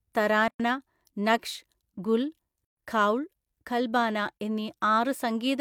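At 0.48 s the speech drops into a silence of about 116 ms, ending at 0.60 s, and at 2.65 s a second one of about 127 ms runs to 2.77 s. Both are gaps at a join of encoded pieces: separately encoded segments were butted together with the encoder's start delay and final-frame padding left in. The flow stops, then resumes exactly where it left off. A waveform shows flat dead air with near-vertical, slightly softened edges; a spectrogram shows a clean blank vertical band across all frequencies.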